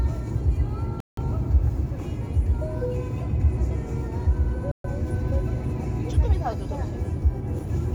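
Everyday sound with two digital broadcast dropouts, at 1.00 to 1.23 s and 4.72 to 4.89 s. The receiver muted after losing a few frames, so the audio drops out and resumes later. Both show as flat-line waveform gaps and full-band blank columns on a spectrogram.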